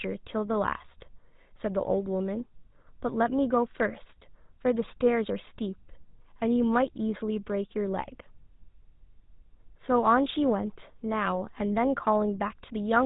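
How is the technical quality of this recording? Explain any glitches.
The quality is poor: the speech has been through an old mobile-phone codec. Throughout the clip, GSM full-rate coding gives the voice a plainly audible buzzy, gravelly roughness, consistent with the original 13 kbps GSM codec. The vocal tract is modelled and driven by a sparse train of regular pulses, so pitch comes out coarse and grainy, and nothing above 4 kHz survives. That buzz, rather than the watery swirl of modern low-bitrate codecs, marks it as GSM.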